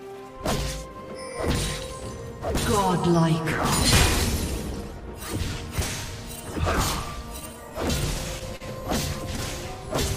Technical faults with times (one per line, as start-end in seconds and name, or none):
8.57-8.63 short stall from a late packet